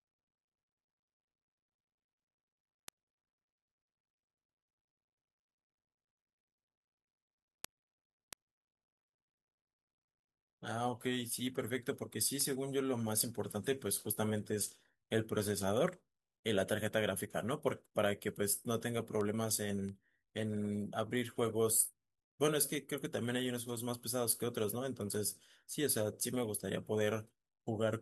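A speech recording whose digital input was not locked to the sending device's clock shows word clock ticks throughout. The two clocks differ by roughly 30 ppm, so they slide past each other about every 0.7 s and a single sample is dropped or repeated at each slip. From 0.17 s to 27.37 s this produces around forty sharp ticks of uneven strength at a steady rate behind the speech.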